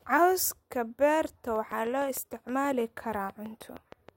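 A train of clicks runs from 1.56 s to 4.10 s: about fifteen near-identical pulses at a steady 6.3 per second, ticking over the speech and continuing through its pauses. Each click peaks a few decibels above the speech itself, so the ticking sits on top of the speech rather than beneath it. The regular spacing likely points to interference from nearby equipment or a faulty connection or power supply injecting a repeating pulse into the signal path.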